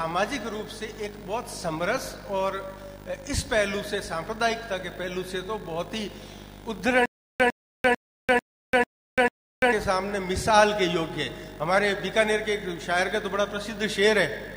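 From 7.06 to 9.73 s there is a stutter with silent gaps, likely caused by the player or stream stalling, replaying its last buffered fragment at each retry and then running dry. The same 102 ms burst of sound comes back six times at a steady 445 ms pace, each repeat followed by about 342 ms of dead digital silence. Whatever audio belonged to that stretch never plays.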